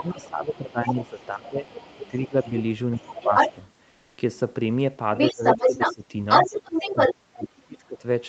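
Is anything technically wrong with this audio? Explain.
Yes, this call speech has three kinds of fault.

Other side's voice leaking through, 0 to 3.53 s at about 5 dB below the talker, then 5.17 s to the end at about 5 dB above. Likely a loudspeaker echo the canceller missed. A second voice is heard, and a spectrogram shows a second set of harmonics.

Speech suppressed in double talk, 0 to 3.58 s (around two seconds affected, dips near 15 dB), 5.31 to 6.03 s (similar dips), and 6.93 s to the end (drops near 35 dB). The canceller likely ducked everything during overlap. The waveform shows the talker's envelope sagging or gapping.

Comfort noise in place of the background, 3.89 to 4.17 s, 280 ms, about 1 dB quieter. Likely Opus discontinuous transmission filling the pause with synthetic noise. The textured background turns smoother, and a spectrogram shows a smooth, featureless band below the 8 kHz limit.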